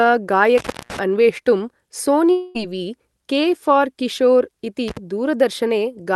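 At 0.58 s the speech cuts out. This is an intermittent contact: a loose plug or cable briefly loses connection. The line stays open for about 0.23 s, and the fault ends around 0.99 s. Crackle marks both edges of the break, and faint hiss fills the gap.

From 2.31 to 2.57 s comes what sounds like a long network dropout. The speech stops, and a fading continuation of the last sound fills the hole for about 0.23 s. There is no true silence. Speech then resumes, but roughly 0.24 s of it is gone. The likely cause is audio packets that never arrived. The receiver stretched the last sound to cover the loss.

At 4.88 s a second intermittent contact break occurs. It is much shorter, about 53 ms, ending near 4.97 s. It gives a quick crackly dropout. All of this is heard through a call codec path whose top end stops near 12 kHz, consistent with Opus.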